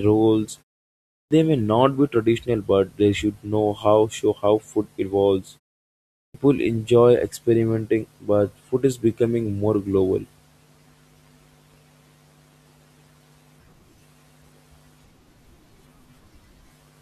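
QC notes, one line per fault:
1.22 s and 6.25 s, clipped start after a pause: after pauses of 0.67 s and 0.74 s, the output wakes about 90 ms late. "may not be traditional" and "enjoy experimenting but" start abruptly, missing their onsets, unlike muted pauses, which lose only background.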